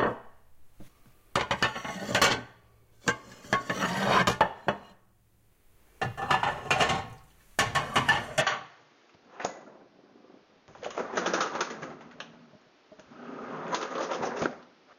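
At 8.42 s the everyday sound abruptly turns duller and boxier and stays that way to the end: nothing above 6.8 kHz gets through, and a new background noise appears roughly 35 dB under the sound. This is most likely an input switched to a poorer device. The loudness doesn't change and there is no gap at the switch, but a different noise floor arriving with the narrower band marks a device change rather than a filter.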